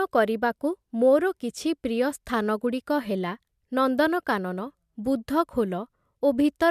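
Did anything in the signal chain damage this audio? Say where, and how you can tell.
No, nothing stood out on listening that would point to damage at any stage of the signal chain.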